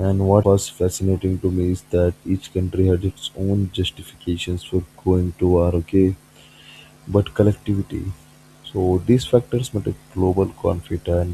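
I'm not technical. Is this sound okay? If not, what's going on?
No, there's one glitch, right near the start. From about 0.40 to 0.44 s, just before "was fascinating to me", there's a quick blip lasting only a few hundredths of a second. That's damaged data in a compressed stream. A small piece of the compressed file got corrupted, so the player couldn't make sense of it, stumbled, and had to hunt for the next clean spot before carrying on.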